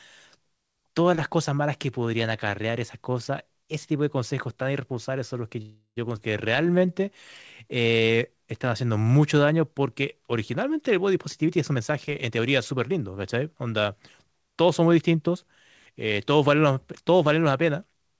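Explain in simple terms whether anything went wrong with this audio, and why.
Yes, several things went wrong in this speech, all of them timing problems from a call connection.

From 5.62 to 5.98 s there is a call audio freeze: the last sound stretches into a fading buzz, then roughly 0.1 s of silence, before the speech resumes exactly where it stopped. This is likely packets arriving late. Nothing is lost; a gap is inserted instead.

Just after, at 6.16 to 6.19 s, comes a skip ahead, the opposite problem. Instead of pausing, playback jumps forward, dropping about 0.2 s of speech and joining the two sides almost seamlessly.

There are two jitter buffer slow-downs, 6.62 to 7.06 s and 7.64 to 8.48 s, running at about 88% and 86% of normal speed. Tiny pieces are repeated to rebuild a reserve, so speech drags and sounds drawn out while keeping the same pitch.

From 11.16 to 14.19 s a jitter buffer speed-up does the reverse, trimming tiny pieces so speech runs at about 111% speed and loses roughly 0.4 s in total. 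It sounds hurried but not higher, unlike a sped-up recording.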